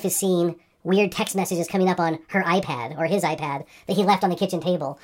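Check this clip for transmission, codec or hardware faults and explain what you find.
The whole clip suffers from a wrong sample rate: the speech runs fast and high from start to finish.

Throughout the clip, the samples are played back faster than they were captured, with no rate conversion. The ratio fits 32 kHz material played at 44.1 kHz: speed rises by 1.38 times and pitch by about 5.5 semitones together. Voices sound hurried and chipmunk-like. On a spectrogram, harmonics and formants sit proportionally higher with wider spacing. On the waveform, syllables and pauses are compressed in time.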